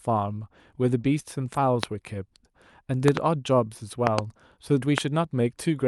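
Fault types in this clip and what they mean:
Lost packet rebuilt from error correction: In this speech, five packets went missing, at about 0.41, 0.55, 1.03, 1.41 and 1.55 s. Each was replaced by a lower-bitrate copy carried in the following packet, so there is no gap. Each 20 ms patch sounds rougher and noisier than its surroundings.
Short concealed packet loss: Between 1.01 and 1.05 s, about 20 ms of audio failed to arrive in time. The decoder filled that hole by extending the preceding sound, following its pitch where the speech was voiced and using shaped noise where it was not, then cross-faded back into the received signal. The result is a brief smear or wobble. The second half of this stretch overlaps one of the error-correction rebuilds.
Loud pop: Sharp transients about 20 dB above the speech appear as single pops at 1.83–1.85 s and 4.98–5.00 s, and as double pops across 3.08–3.19 s and 4.07–4.21 s. 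The speech continues underneath each one. The sound is that of a sudden voltage step or pulse added to the signal, likely from a connector, switch, static discharge or driver glitch, shaped by the circuitry downstream into a short, hard click or thump.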